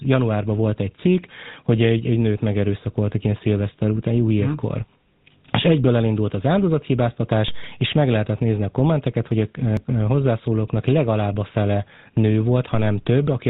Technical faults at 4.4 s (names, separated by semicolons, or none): GSM full-rate codec